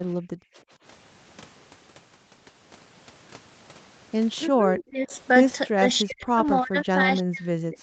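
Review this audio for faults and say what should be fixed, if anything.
Right at the start, from 0.16 to 0.71 s, the room sound ducks by up to about 27 dB for roughly 0.4 s in total. That's background gated by the echo canceller, which clamped the mic while the loudspeaker played. Gentler suppression or comfort noise would smooth it over.

From 4.48 to 5.13 s the talker dips by around 25 dB for about 0.7 s, and from 5.68 s to the end it sinks by about 40 dB. This is likely speech suppressed in double talk, with the canceller turning down both sides while they overlapped. A canceller with better double-talk detection would keep the near talker up.

At 5.11 to 5.17 s a faint copy of the voice returns about 308 ms late, roughly 30 dB down. That points to an echo leak, where some loudspeaker pickup slipped past the loudspeaker side's canceller. Better echo-path modelling, or a headset on that side, would stop it.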